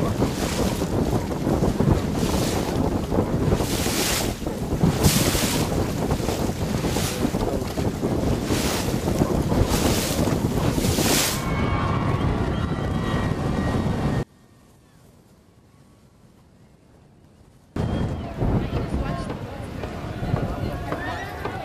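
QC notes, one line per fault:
14.23–17.76 s, one channel inverted: level drops about 29 dB as a likely polarity-reversed channel cancels shared content in mono; waveform and spectrogram shrink to near-empty.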